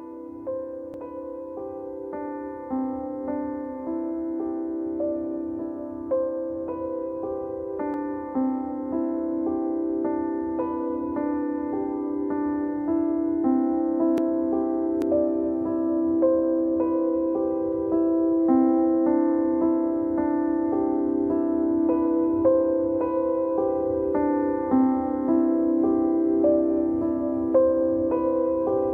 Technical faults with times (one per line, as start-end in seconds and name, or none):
0.94 dropped buffer (overrun)
7.94 dropped buffer (overrun)
14.18 dropped buffer (overrun)
15.02 dropped buffer (overrun)